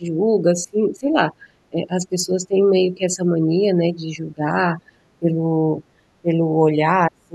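The speech dips in level at 0.0–0.18 s, 0.41–5.03 s, 5.19–5.56 s, 5.82–6.02 s and 6.22–7.34 s. Drops reach about 20 dB, and about 35 dB at the end. This is speech suppressed in double talk. An echo canceller likely mistook the talker for echo.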